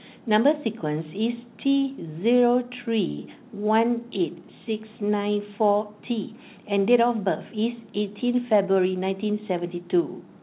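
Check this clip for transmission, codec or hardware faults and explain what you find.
Two jitter-buffer faults are audible in this speech, carried over a narrowband call path whose cut-off at 4 kHz fits G.711 mu-law.

From 3.08 to 3.20 s there is a short stall from a late packet. A packet missed its playout time, so the receiver stretched the last sound for 96 ms and then resumed where it stopped. Nothing is lost, but one sound hangs on with a faint buzz or dip.

From 8.54 to 9.56 s the jitter buffer speeds up. Having built up extra delay, the receiver trimmed short pitch-period slices repeatedly, about 70 ms in total. The speech plays at 107% speed with unchanged pitch and sounds hurried.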